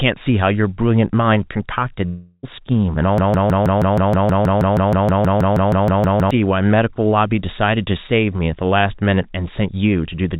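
A long network dropout hits this speech recording from 2.06 to 2.45 s: for about 0.36 s no audio arrives, so the receiver stretches the last sound into a fading buzz or hiss, a brief silence follows, and the speech resumes with that stretch missing, likely a network outage. A broken-record loop runs from 3.18 to 6.31 s, where a 0.16 s fragment repeats back to back 20 times while the intended audio is lost, likely from a stalled player or stream resending its last buffer. Through the G.711 mu-law call path, nothing is heard above 4 kHz.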